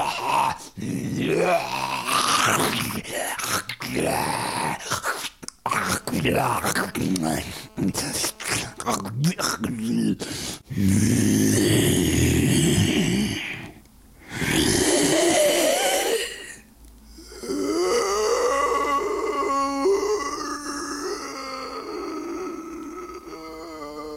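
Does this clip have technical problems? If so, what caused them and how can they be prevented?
Yes. GSM phone buzz from 5.66 to 8.81 s, about 28 dB below the sound: a nearby 2G phone's data bursts at 217 Hz are rectified by the audio circuitry, producing an intermittent buzz. On a spectrogram it appears as evenly spaced harmonic lines at multiples of 217 Hz; on a waveform, as a regular pulse train. Keep mobile phones switched off or in flight mode and well away from microphones, cables and recording gear.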